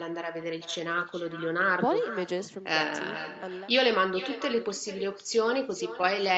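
From start to finish, every phrase of the speech is trailed by a fainter, thinner copy arriving roughly 0.4 s later, sitting about 13 dB below the direct sound. This is echo with no canceller: the far end played the call through a loudspeaker, its microphone caught that playback, and nothing removed it before it travelled back. That delay reflects the full network round trip, and the narrow 8 kHz band of the call path colours the returning copy too.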